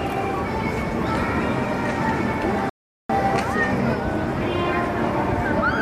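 At 2.70 s the sound cuts out abruptly into silence. This is a rebuffering stall. The player ran out of downloaded audio and had to wait for more data before it could continue. The gap lasts about 0.4 s, ending at 3.10 s. Playback then resumes at exactly the point where it stopped. No audio is skipped or lost. The stall simply inserts roughly 400 ms of dead air into the timeline.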